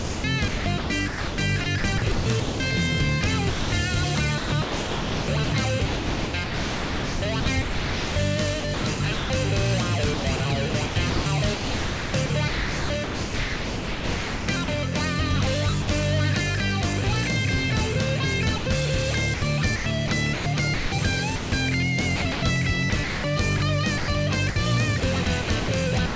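Audio heard over a call path with nothing above 8 kHz, which fits a G.722 link, turns choppy from 0 to 2.6 s, 4.38 to 9.3 s, 10.14 to 14.68 s, 19.34 to 21.52 s and 22.16 to 26.16 s. This is likely sound chopped by the voice detector, which keeps switching transmission off and filling the gaps with comfort noise. Shorter gaps, where the sound simply gives way to steady noise, fall at 3.5 s for 220 ms, 15.82 s for 60 ms and 18.58 s for 80 ms, likely sound dropped by the voice detector, which mistook the audio for background and stopped sending.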